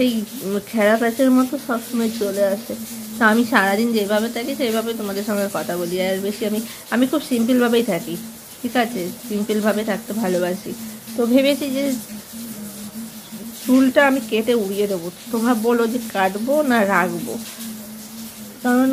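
No technical faults can be heard anywhere in the audio. There is nothing here that calls for comment from an engineering standpoint.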